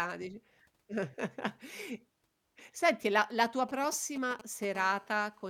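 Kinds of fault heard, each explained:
GSM signalling bursts: a nearby 2G phone exchanging short control transmissions, its radio pulses rectified by the audio circuitry. Just after "senti la la tua", from 3.69 to 4.65 s, a galloping tick-and-buzz pattern sits roughly 15 dB below the speech. On a spectrogram it shows as clustered vertical stripes with 217 Hz harmonic combs.
GSM phone buzz: a 2G phone in an active call, transmitting 217 times a second, with each burst rectified into the audio path. From 4.75 to 5.45 s a hard, raspy 217 Hz buzz runs about 22 dB below the speech. The spectrogram shows evenly spaced harmonic lines reaching high frequencies, and the waveform shows a regular pulse train.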